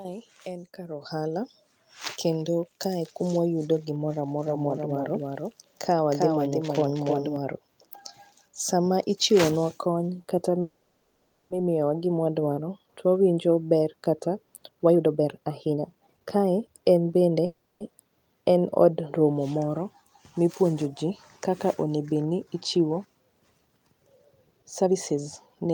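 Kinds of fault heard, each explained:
Microphone volume stepped up: At 1.02 s the whole signal, speech and background together, jumps up by about 8 dB in a single step with no ramp. The level change is abrupt rather than a gradual fade. This is what an automatic input-volume adjustment sounds like when call software judges the microphone too quiet and raises the device gain at once.
Doubled audio track: From 4.46 s to 7.36 s a second full-band copy of the speech runs about 300 ms behind the original and roughly 5 dB quieter. It carries no reverberant tail or room colouring, and it appears and disappears abruptly at those edges. The likely cause is the same audio being captured twice, with one path arriving later and mixed back in.
Call audio freeze: At 10.61 to 11.52 s and again at 17.45 to 17.82 s the sound stalls and the last fragment is stretched into a fading buzzy fill lasting 890 ms and 350 ms. 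Afterwards the speech resumes exactly where it stopped, with nothing skipped, so the gaps add delay. Likely cause: late packets emptying the jitter buffer, with the receiver concealing the wait.
Jitter buffer speed-up: From 14.68 to 17.37 s the speech runs at about 132% speed, removing roughly a second of material. From 24.52 to 25.72 s it runs at about 124%, removing roughly 0.3 s. Pitch stays unchanged while the delivery sounds hurried. The receiver trims repeated pitch-period slices to shrink excess buffered audio, which follows the freezes that built up delay.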